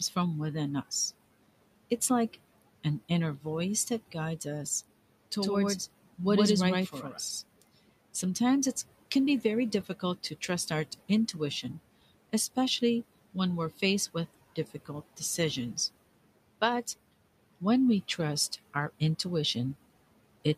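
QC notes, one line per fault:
5.42–7.42 s, doubled audio track: A second, full-band copy of the speech runs around a tenth of a second behind the original at roughly the same level, giving a hard slapback echo with no decay or room colour. It starts and stops abruptly at the edges of this stretch rather than fading like a reflection. This is likely a second capture of the same signal arriving through a slower path, or two out-of-step copies left in by an edit.
6.92–7.18 s, speech cut by the noise suppressor: Inside the doubled stretch, parts of the speech drop by up to about 11 dB, adding up to roughly a tenth of a second of affected sound. The suppressor misjudged these low-level fragments of speech as background and pulled them down along with it. Soft consonants or word endings there sound swallowed or faint, while the room noise sits about 20 dB below the speech.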